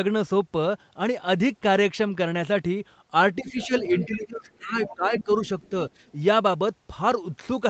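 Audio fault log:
3.41–3.72 s and 3.9–5.29 s, speech suppressed in double talk: the talker's level dips, by about 10 dB at first, then by about 20 dB for roughly a second. Both sides were likely talking at once, so the echo canceller turned everything down.
3.49–4.14 s, 4.52 s, 4.87–4.95 s, 5.16–5.24 s and 5.46–5.7 s, other side's voice leaking through: a second voice comes through in quiet scraps, faint at 4.52 s and 5.46 s and loudest near 5.2 s. The echo canceller likely missed loudspeaker playback picked up by the microphone.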